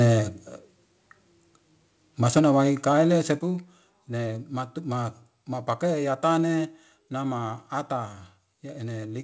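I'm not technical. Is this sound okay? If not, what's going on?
No, not quite. Around 2.36 to 2.39 s, right before "wai kaile", there's a brief harsh crackle on the loudest bit. That's microphone overload. The mic was likely turned up so high that the tops of the loudest peaks got sliced off, and that flattening is what makes the gritty edge. It's over in a few hundredths of a second.

There's also microphone volume stepped down, three times: at 2.39 s, right after that crackle; at 3.39 s, just after "wai kaile"; and at 6.96 s. Each time the whole sound, voice and background together, suddenly gets quieter in one jump. That's likely the call software noticing the mic was too hot and turning its input down to stop the distortion, which is why the first drop comes right after the crackle. The biggest drop is at 3.39 s, and the one at 6.96 s is the gentlest. The call connection itself has no very high treble, which is normal for this kind of call.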